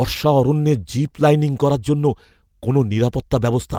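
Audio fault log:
throughout, clock drift between sender and receiver: the speech carries a faint, uneven stutter from start to finish, as if the flow keeps catching for an instant and moving on. The sending side's clock runs roughly 4 percent fast against the receiving side's, so audio arrives a little quicker than it is played out. The jitter buffer steadily overfills, and the receiver has to keep trimming material to hold its fill level, which leaves small irregular hiccups across the whole clip.
0.25 to 3.45 s, repeated timing corrections: through this stretch any effect is slight, heard if at all as tiny skips at irregular spacing or an unsteady pace. To keep up with the faster sender, the receiver repeatedly cuts out brief slices of audio, all in the same direction, so the result plays at about 105 percent of natural speed. Each cut is small, heard if at all as a slight jolt or a wobble in tempo rather than a clear gap.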